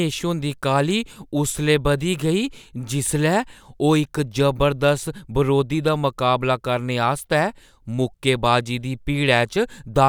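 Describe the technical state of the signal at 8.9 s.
At 8.9 s you're right in the middle of word clock ticks, which run through the speech from about 0.32 s to 10.05 s. The receiving device is on its own clock rather than locked to the sender's, and a drift of roughly 15 ppm means they slip past each other about every second and a half. Each slip drops or repeats a single sample, so you hear a sharp, uneven tick, around seven of them across the stretch.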